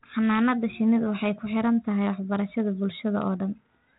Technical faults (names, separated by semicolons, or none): none